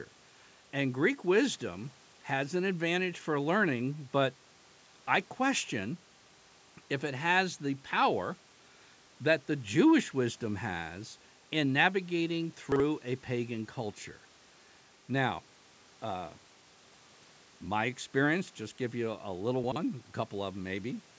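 Chunks out of order occur at 12.72 to 12.80 s and again at 19.64 to 19.76 s. At each, a 40 ms chunk plays one or two chunks late, giving a brief jumbled stutter. The waveform shows three abrupt joins at each, and the spectrogram shows misplaced segments against the band ending at 8 kHz.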